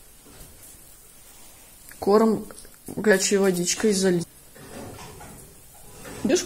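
Jumps ahead at 3.10 s, 4.22 s and 6.28 s, by around 100, 300 and 200 ms respectively: compressed frames skipped, whole 26.1 ms frames left unplayed.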